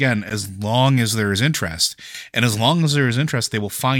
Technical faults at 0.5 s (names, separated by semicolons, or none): pre-emphasis left on